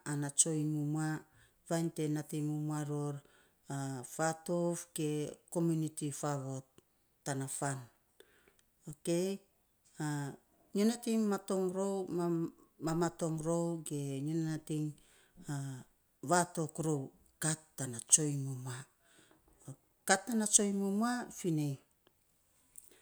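At 8.91 s there's a DC step: the waveform's zero line suddenly jumps by about -49 dBFS, the kind of shift you get when a converter recalibrates or an offset input gets switched in. It doesn't hold, though. It bleeds away the way a 20 Hz high-pass would let it, so what you hear is a single low thump or click while the speech carries straight on through it, untouched.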